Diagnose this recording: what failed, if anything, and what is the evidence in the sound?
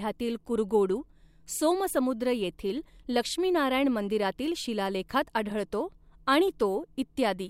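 No fault found in this recording.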